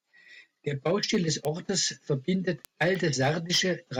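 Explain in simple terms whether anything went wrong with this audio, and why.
Yes, there's a problem: word clock ticks. From 0.25 s to about 3.85 s, around fifteen sharp ticks come roughly every third of a second. Two digital devices are running on slightly different clocks, so a single sample gets dropped or repeated each time they slip past each other.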